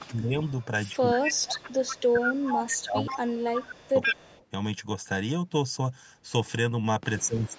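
Echo leak, 0.0 to 0.08 s: a faint delayed copy of the speech trails the sound by 129 ms. The likely cause is a loudspeaker on the far side whose echo canceller let part of its own playback back into the microphone. It returns from 0.45 to 3.44 s, now only about 10 dB below the speech, and again from 3.8 to 4.45 s, where the 129 ms repeat is about as loud as the speech and clearly doubles it.

Speech suppressed in double talk, 0.09 to 0.36 s: the speech dips by about 10 dB. The likely cause is both sides talking at once, so the canceller could not tell the talker from the returning echo and turned everything down. It recurs from 0.99 to 1.72 s and from 2.06 to 4.08 s, with drops of about 25 dB that leave the speech gapped and thinned, and briefly from 7.17 to 7.56 s, dipping about 15 dB.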